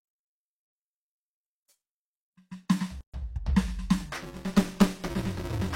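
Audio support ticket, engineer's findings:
Gap at a join of encoded pieces, 3.01–3.14 s: music drops out for about 129 ms, then resumes where it stopped. Separately encoded segments (pieces every 4 s) joined untrimmed, with encoder delay and last-frame padding left in. Waveform: flat hole, slightly smeared edges. Spectrogram: full-band vertical blank stripe.

Buffer tearing, 4.13 s to end: robotic buzz at 200 Hz over the music, present only with signal. Ring-buffer writer and hardware read pointer slipped, which fits a 5 ms period. Roughly a third of each period replays audio about 10 ms old. Waveform: hard discontinuities every 5 ms. Spectrogram: vertical click lines and 200 Hz comb striations.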